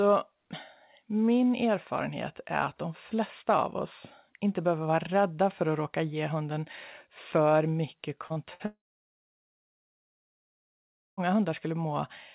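Short concealed packet loss at 8.27 to 8.33 s and again at 8.33 to 8.39 s, right after "ge hunden för mycket", leaves two brief smears where about 30 ms each went missing and was patched by continuing the preceding sound. A burst of packet loss at 8.54 to 8.63 s drops about 60 ms, bridged by a short held, fading extension before the audio jumps ahead. A long network dropout is the likely cause of the gap from 8.66 to 11.20 s: about 2.5 s of this speech recording is lost, the concealment fades quickly, and roughly 2.4 s of silence remains before the sound resumes. Throughout, the band stops at 4 kHz, which fits a G.711 A-law call path.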